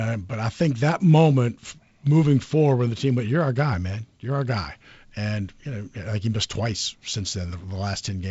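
Nothing faulty can be heard in this wideband telephone speech.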